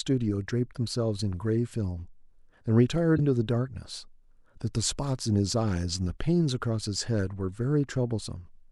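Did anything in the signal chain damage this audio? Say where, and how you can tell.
Yes. The damage sits at the codec stage, where part of the compressed stream was corrupted. At 3.15 to 3.19 s the speech breaks up for about 40 ms, a sound no microphone or room could produce. That is damaged data in a compressed stream: the decoder hit frames with bad bytes, misread them and lost sync, then resumed at the next valid frame header, leaving a short glitch.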